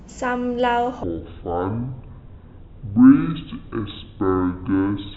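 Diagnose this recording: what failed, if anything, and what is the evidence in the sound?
From 1.03 s to the end, the speech suddenly runs at about half speed, 0.51 times the original. Pitch drops with it, by roughly ten semitones, so the voice turns deep and slow. Timing and pitch shift together at the same instant. That is a section at the wrong speed. The stage is likely playback or sample-rate handling, where this part was read against a clock near half the correct rate.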